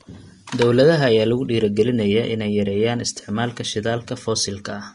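Speech with plainly audible damage throughout: nothing above 10.6 kHz, and the upper treble turns hissy and grainy rather than merely dull, which separates it from a simple low-pass filter. The likely cause is Vorbis compression at a low bitrate, consistent with around 36 kbps.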